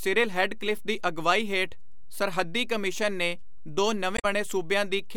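Throughout the speech a DC offset is present: the whole waveform sits displaced from zero by a fixed amount, as if a constant voltage were added to every sample. You cannot hear it as a sound. It shows up as a steady component at 0 Hz and eats into headroom on one side of the waveform. That sets it apart from low-frequency hum or rumble, which vibrate at an audible or near-audible rate rather than holding still.

From about 4.14 to 4.25 s there is damaged data in a compressed stream. Roughly a tenth of a second of the encoded material was corrupted. The decoder misreads those frames, loses sync and hunts for the next valid frame header, producing a short chirp, squawk, click or short hole in place of the speech.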